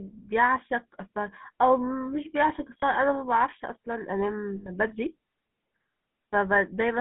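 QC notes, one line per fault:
Throughout: GSM full-rate codec. The audio is band-limited to roughly 150 Hz to 3.5 kHz. It carries the buzzy, gravelly roughness of this early codec, which fits 13 kbps GSM full rate. The vocal tract is modelled and driven by sparse, regularly spaced excitation pulses.
2.80 to 2.84 s and 4.56 to 4.69 s: lost GSM frames. Each gap is filled by repeating the last good frame, so the sound holds as a brief, rough metallic ring. The first fits one 20 ms frame, the second about five frames, 100 ms.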